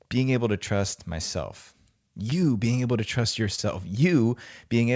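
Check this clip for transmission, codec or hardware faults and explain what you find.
There are two short concealed packet losses in this speech. The call path is G.722, and nothing above 8 kHz can be heard. The first loss runs from 2.30 to 2.33 s, just after "able to trust myself". The second runs from 3.55 to 3.60 s, just after "being able to trust". Each gap fits one lost 20 ms packet. The receiver covered each hole by extending the preceding sound, then blended back into the real audio. The result is a brief smear or wobble in the voice.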